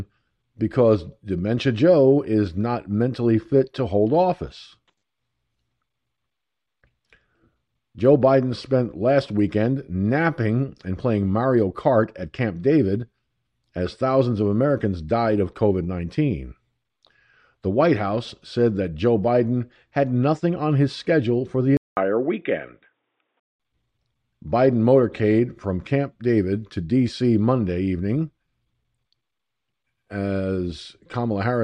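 Speech; at 21.77 s a 200 ms gap, then dull sound with nothing above 3.8 kHz until 23.6 s, likely an input switched to a poorer device.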